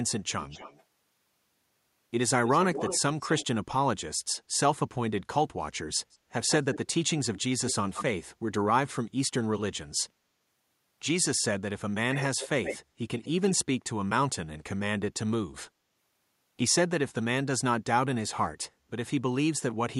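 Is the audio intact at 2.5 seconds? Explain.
No. An echo leak runs from 2.45 to 3.46 s. A delayed copy of the speech returns about 226 ms late, roughly 10 dB below it. This is likely a loudspeaker pickup that the far side's echo canceller failed to fully remove.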